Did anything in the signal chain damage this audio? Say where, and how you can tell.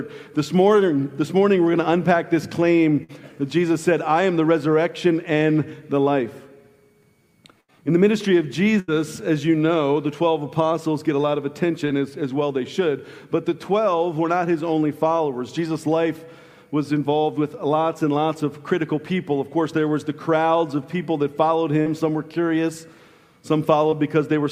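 Yes, the network stage dropped audio. There's a burst of packet loss at 3.03–3.11, 7.61–7.72 and 8.80–8.90 s, about 60, 80 and 80 ms gone. Each time the receiver stretches the last sound into a fading buzz or hiss, then jumps ahead.

Shorter gaps show up as short concealed packet loss at 11.88–11.92, 21.82–21.88 and 23.90–23.94 s, roughly 20, 40 and 20 ms. The decoder patches each hole by continuing the previous sound and blending back, so you hear a quick smear or wobble.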